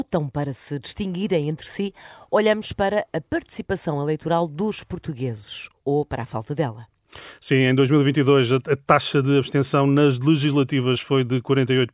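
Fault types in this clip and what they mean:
Nothing stands out here, no dropouts, glitches or distortion anywhere in the speech.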